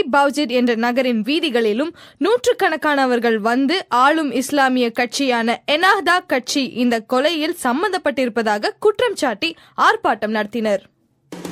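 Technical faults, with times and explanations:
No technical faults detected in the clip.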